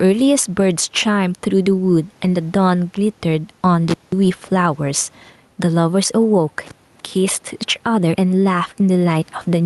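Throughout the speech, the level pumps with a swing of around 5 dB, so loud and quiet passages sit unnaturally close together and the delivery sounds squashed. This is gain pumping, and the likely cause is input gain set far too high for the microphone, with a fast limiter or compressor clamping down on each loud moment and releasing in the gaps.

At 3.90 s the sound drops out abruptly with a crackle, stays away for about 185 ms, and returns with another crackle at 4.12 s. At 6.65 s the same happens again, this time for about 233 ms, ending at 7.00 s. Faint hiss remains during each gap. This is an intermittent contact: a loose cable or plug momentarily opens the signal path, and the crackle comes from the contact breaking and remaking.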